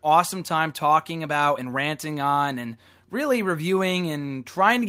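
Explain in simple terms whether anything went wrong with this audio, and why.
Nothing went wrong here.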